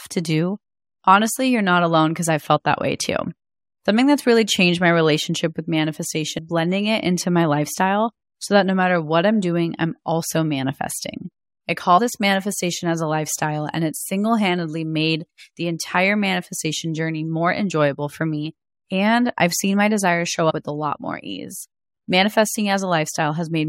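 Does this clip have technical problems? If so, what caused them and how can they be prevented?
Yes. Compressed frames are skipped at 6.37 s, 11.97 to 11.99 s and 20.49 to 20.52 s. At each point the speech jumps forward, losing about 200 ms, about 50 ms and about 100 ms of audio respectively. Those gaps fit whole frames of roughly 23.2 ms going missing or being rejected by the decoder as damaged. Preventing this means storing and transmitting the encoded file with integrity checks and error protection so that no frames are lost or corrupted.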